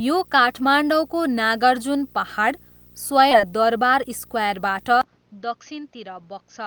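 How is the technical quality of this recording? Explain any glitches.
The recording has four clear technical problems: a constant video-related buzz, a sudden jump forward, a stretch of hurried playback, and a late change to a duller-sounding input.

Video or display buzz runs through the whole clip. A screen or video cable is coupling interference into the audio path, producing a buzz at 59.94 Hz, the field rate of NTSC-style video, with hash above it and a whine at 15.7 kHz from the line scan. It sits about 25 dB below the speech.

A skip ahead happens from 3.31 to 3.33 s. Roughly a second of speech was dropped while later audio was already queued, and the two sides are spliced with no gap filled in. The speech lurches forward abruptly, as if a chunk of the sentence vanished, and the overall delay shrinks by about the same second.

Jitter buffer speed-up follows from 3.45 to 4.60 s. The receiver still held more audio than its target, so it trimmed short pitch-period slices over and over to catch up, removing roughly a tenth of a second in total. 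The speech plays at 109% speed while keeping its pitch, sounding hurried rather than higher in tone.

Input switched to a poorer device at 5.01 s and stays until the end, likely a change to another microphone or a headset call profile. A 20 ms dropout marks the switch. After it, nothing above 6.6 kHz gets through, so the speech turns dull and boxy. The level falls about 10 dB, and a new background noise floor appears roughly 35 dB below the speech.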